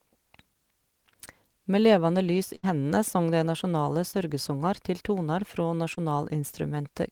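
Speech with a burst of packet loss at 2.55–2.65 s. About 80 ms goes missing, bridged by a held, fading continuation of the last sound rather than silence, and the speech resumes further on. Short concealed packet loss at 4.11–4.15 s and 5.95–5.99 s fills only about 20 ms each time. It is heard as a brief smear, not an audible gap, and blends straight back in.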